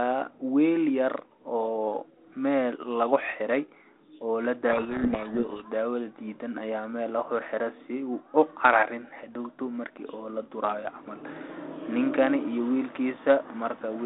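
From 4.72 to 5.69 s there is a codec payload misread: the two ends disagree on the bit order inside each G.726 code word, so the decoder pulls valid-looking values from the wrong bit positions and rebuilds the wrong waveform. For just under a second the speech is buried in harsh, gritty distortion. It then clears back to the narrow 300 Hz to 3.6 kHz telephone band of the 32 kbit/s link, which carries only light coding grit.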